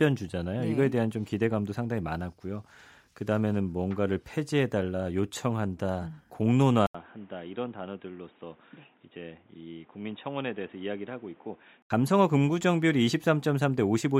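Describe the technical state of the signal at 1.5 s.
At 1.5 s the speech signal is intact, with no audible technical fault at that moment.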